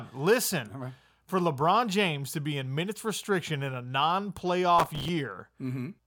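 Speech, with a burst of processor overload crackle from 4.79 to 5.09 s. The machine falls behind and misses around thirty tiny buffer deadlines over that stretch, each replaying a scrap of old audio with hard edges, which fits buffers of roughly 3 ms.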